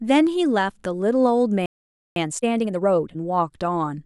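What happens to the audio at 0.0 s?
Nothing goes wrong at 0.0 s; the speech starts cleanly, with no dropout, click or distortion there.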